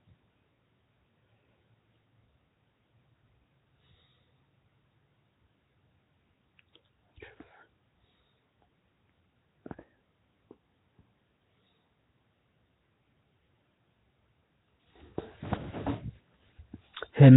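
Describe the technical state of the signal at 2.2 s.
Nellymoser compression at 2.2 s, as throughout the clip, likely from the Nellymoser Asao codec. It spends a fixed two bits per sample, fitting 16 kbps, and fills starved bands with noise. The speech sounds hissy, smeared and underwater, with nothing above 3.9 kHz.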